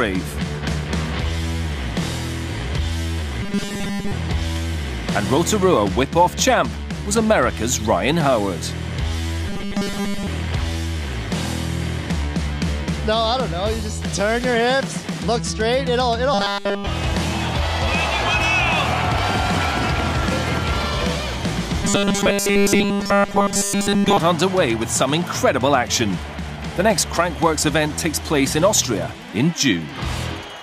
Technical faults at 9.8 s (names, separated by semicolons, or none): robotic sound from repeated short buffers